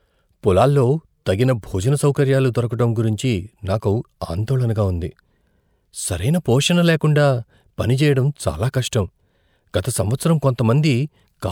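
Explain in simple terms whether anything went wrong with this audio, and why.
Nothing went wrong here.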